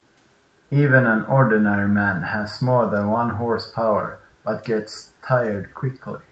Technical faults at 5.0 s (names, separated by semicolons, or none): echo leak